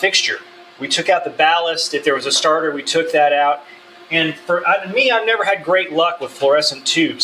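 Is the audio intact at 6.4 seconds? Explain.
No. A noise suppressor built for speech is applied to this sound throughout, mistaking steady parts for noise. Its level pumps by around 10 dB. The sound is also cut by the noise suppressor from 6.23 to 6.42 s. Its gain dips by about 8 dB there, so the sound thins.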